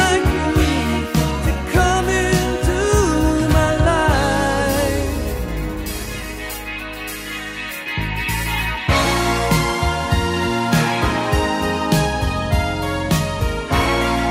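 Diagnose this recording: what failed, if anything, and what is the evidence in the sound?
Nothing failed at any stage here: there's no audible break, click, dropout or distortion anywhere in the recording to diagnose.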